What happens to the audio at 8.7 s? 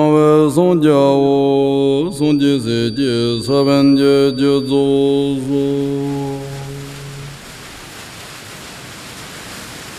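Nothing goes wrong at 8.7 s; the audio plays through that moment intact, with no dropout, click, distortion or other fault.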